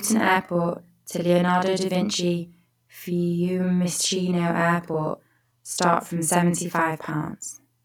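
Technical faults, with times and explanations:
Throughout, channel delay (doubling): one channel arrives 40 ms late and is summed to mono, so every syllable of speech is followed by an equal-level slap copy.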